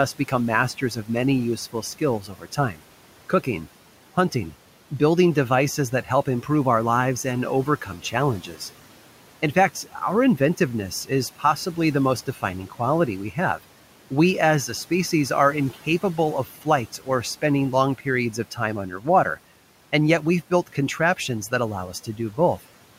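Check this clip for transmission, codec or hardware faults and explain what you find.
One fault recurs: speech cut by the noise suppressor. It occurs at 0.19–2.82 s, at 7.86–8.59 s after "our lives and", at 9.42–14.12 s before "as a species are", at 15.74–17.08 s before "spending long", and at 17.98–19.38 s. The suppressor mistakes soft speech for noise and turns it down with the background. Short fragments drop by about 10 to 12 dB and sound swallowed. The room noise, about 21 dB below the speech, belongs to the recording.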